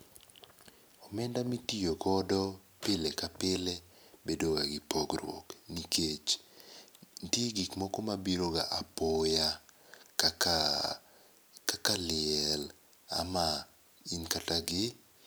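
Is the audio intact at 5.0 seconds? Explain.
Yes, at 5.0 seconds the audio is intact, with no audible dropout, click, distortion or other fault at that point.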